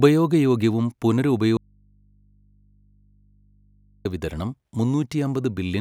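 From 1.57 to 4.05 s speech cuts abruptly to hum: an audio dropout to a faint residue, likely a broken feed into a live input.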